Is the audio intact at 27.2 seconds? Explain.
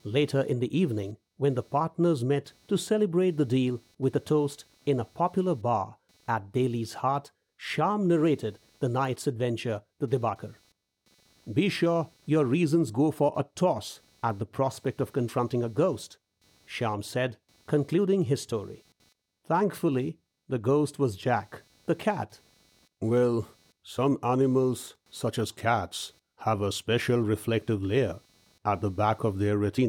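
No: computer activity noise runs through the whole clip, including 27.2 s. Processor load shifts the shared ground, adding a faint buzz pulsing at a few hundred hertz, seen on a spectrogram as thin harmonic stripes far below the speech.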